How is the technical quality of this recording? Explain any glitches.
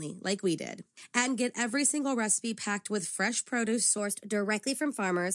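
The recording has one glitch near the end. From 3.98 s, right after "packed with fresh produce", to the end of the clip, the speech has a wrong sample rate fault: it plays about 1.09 times too fast, which fits audio recorded at 22 kHz being played at 24 kHz with no conversion. Speed and pitch rise together, roughly 1.5 semitones higher, so the voice sounds slightly hurried and higher. On a spectrogram, harmonics and formants step up about 9% and syllables compress in time. The waveform shows shorter, tighter syllable envelopes.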